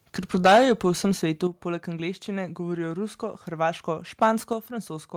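From 0.34 to 0.72 s the speech has microphone overload. The loudest syllables break up with a harsh, crackling edge. Their peaks seem to run about 8 dB past the converter's limit. The tops of the waveform are flattened, and roughly a tenth of the samples in that stretch are clipped. The likely cause is an input volume set too high.

At 0.47 s there is a microphone volume step-down. Voice and background drop together by about 2 dB in one instant. It lands inside the distorted stretch. The likely cause is the call software reacting to the clipping by lowering the device's input volume. Two more steps follow. At 1.47 s the level falls by about 7 dB, and at 4.53 s by about 5 dB. Each one is a sudden, clean drop in loudness, with no fade.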